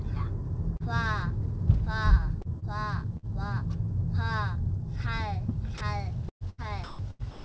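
A brief smear or wobble at 0.77 to 0.83 s is short concealed packet loss. About 30 ms of the stream never arrived in time, so the receiver extended the preceding sound to cover the hole, as a pitched continuation if it was tonal or as shaped noise if not, then crossfaded back into the real signal.

Between 2.42 and 2.68 s the audio turns choppy, with roughly 52 ms of it swapped for a flat, synthetic-sounding background. This is sound chopped by the voice detector, likely because the sender's detector switched transmission off and on, letting the receiver insert comfort noise where quieter parts of the sound were.

At 3.17 to 3.26 s a burst of packet loss removes about 60 ms. The sound just before the gap is stretched into a held, fading continuation, and the audio then picks up further along with that stretch missing.

At 5.78 to 5.81 s the sound gives way for about 30 ms to steady background noise and then returns. 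This is sound dropped by the voice detector, likely because a quiet moment was judged to be background, so nothing was sent and comfort noise stood in.

From 6.29 s to the end the chopping returns more heavily. About 580 ms of the sound is replaced by comfort noise in stretches, so the sound repeatedly breaks up against the synthetic floor. This is again sound chopped by the voice detector. Throughout, nothing is heard above 8 kHz, which fits a G.722 wideband call codec running at around 64 kbps.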